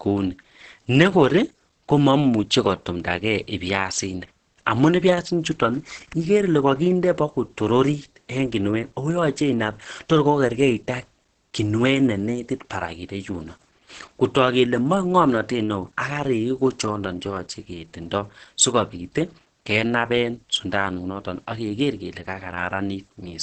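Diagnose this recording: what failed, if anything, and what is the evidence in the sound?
Codec stage. Throughout, the speech is muffled and hoarse, with nothing above 8.6 kHz. This is likely Opus compression in speech mode, starved near 12 kbps.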